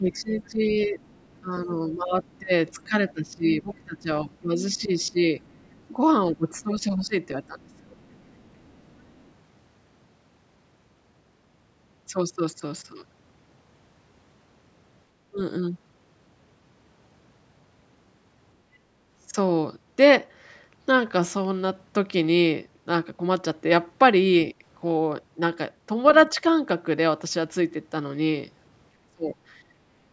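From 0.0 to 5.17 s the speech is pulled down in pieces, about 3 s in total, by up to about 15 dB: speech suppressed in double talk, likely an echo canceller ducking the talker while the far side spoke. On a waveform the envelope sags, and the spectrogram's upper harmonics thin out. It recurs at 6.32–7.98 s, briefly at 15.31–15.38 s, and at 29.15–29.36 s, where the dip reaches about 25 dB.

Overlapping this, the other side's voice is leaking through, likely as loudspeaker echo the canceller missed. It appears at 0.4–1.4 s (about 30 dB down), 2.27–5.84 s and 7.73–9.3 s (about 35 dB down), and 26.08–26.3 s (about 25 dB down). It is faint, showing as a second, weaker harmonic pattern beneath the main speech.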